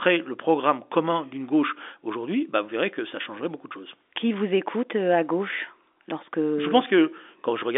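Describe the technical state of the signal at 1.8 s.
At 1.8 s the speech is intact, with nothing wrong beyond the ordinary narrow band of G.711 telephone coding, which leaves nothing above about 3.7 kHz.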